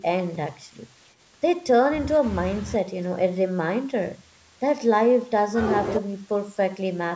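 No faults turn up anywhere in this bit of speech, which just carries the usual marks of a call microphone's processing, with the lowest bass trimmed away and nothing above 8 kHz.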